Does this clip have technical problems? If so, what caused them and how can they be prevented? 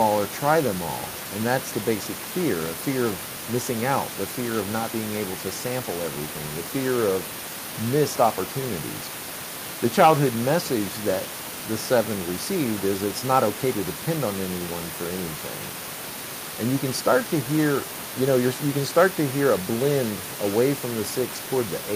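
No, the clip has no technical faults, so there is nothing to trace back or prevent. Background noise from the room sits about 12 dB below the speech, and that is part of the recording space rather than a problem with the system.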